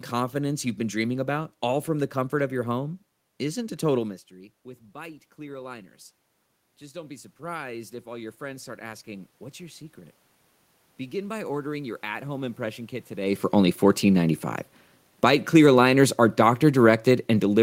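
From 6.79 to 10.26 s, automatic gain rising: after the input drops by about 17 dB, the gain climbs about 7 dB, lifting speech and room noise together, unlike the talker moving around 4 s.

From 15.09 s to the end, automatic gain falling: the level sinks gradually with its background, whereas the change near 13 s leaves the room noise steady.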